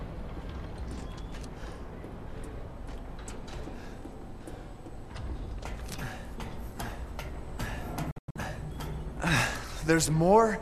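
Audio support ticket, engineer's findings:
Digital broadcast dropout, 8.11 to 8.36 s: the sound mutes in a few short holes, 192 ms gone in total, longest gap 96 ms, with quick 3 ms fades. The receiver muted on bad frames, which fits about eight lost. That audio's gone for good.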